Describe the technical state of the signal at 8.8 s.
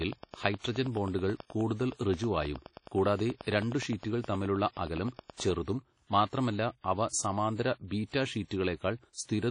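WMA compression at 8.8 s, as across the whole clip: the speech rings and smears, with audible washy noise that rises and falls with the signal and nothing above 10 kHz. This is likely a long-block transform codec whose quantisation noise spreads in time, which fits a low bitrate around 32 kbps.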